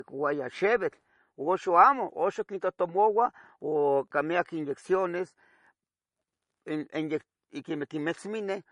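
From start to finish the speech sounds dull, with nothing at all above about 10.6 kHz and the smeared, watery edges typical of heavy MP3 coding. The likely cause is low-bitrate audio saved at a high bitrate: the speech was first squeezed through MP3 at a rate that fits around 40 kbit/s, then re-encoded as MP3 at a much higher rate, around 256 kbit/s. The second pass cannot rebuild the missing top band or undo the earlier artefacts.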